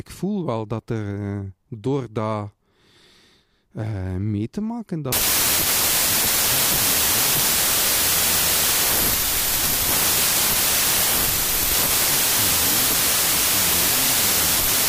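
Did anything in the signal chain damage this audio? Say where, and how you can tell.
Yes. A wrong sample width fault at the sample-format conversion stage runs from 5.12 s, just after "eh mee te maken", to the end of the clip, with "ook voor mijn ma" audible through it. The speech sinks into loud noise and plays at 0.75 times speed, lower in pitch. Data written as 32-bit integers are being read as packed 24-bit, so most values straddle mismatched bytes. Only occasional alignments keep the real top bits, which is why the speech survives faintly under the noise.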